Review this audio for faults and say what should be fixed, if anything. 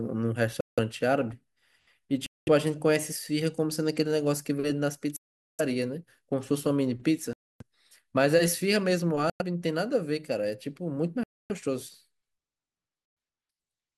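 Seven silent gaps, 0.1 to 0.43 s long, interrupt the speech at 0.61, 2.26, 5.16, 7.33, 9.30, 11.23 and 13.06 s. They appear as flat waveform stretches and blank spectrogram bands. Likely Bluetooth stalls: delayed packets let the headphone buffer run dry. Keep the source close, away from interference.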